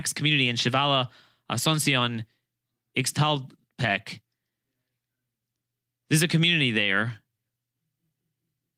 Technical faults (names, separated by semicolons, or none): none